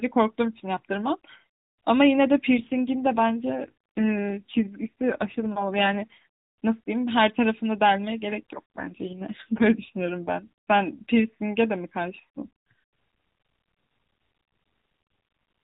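From 2.58 to 6.25 s, and again from 8.52 to 10.35 s, the speech shows an AMR rate drop. The narrowband mobile codec falls to a lower mode, which fits a step from 12.2 down to 5.9 kbps, with the spare bits going to error protection. Bandwidth stays capped at 4 kHz and nothing drops out, but the voice turns rougher, buzzier and more synthetic. It returns to the lighter 12.2 kbps coloration once each episode ends.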